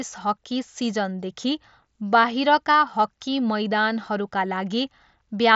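Nothing stood out on listening to this speech recording.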